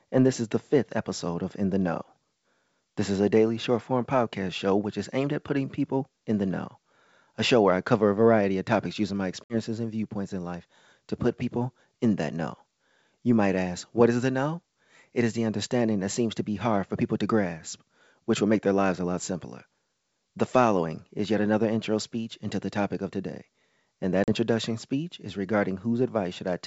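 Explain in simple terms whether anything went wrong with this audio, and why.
Two short dropouts come from packet loss on an ADPCM call. At 9.44 s, right after "of topics using my", about 60 ms of speech (a few packets) vanishes into silence, and at 24.24 s, after "of today and that", about 40 ms (a couple of packets) goes missing. Unlike a simple gap, the voice doesn't come back cleanly: the decoder has lost track of the sound, so the speech briefly returns slightly distorted before settling.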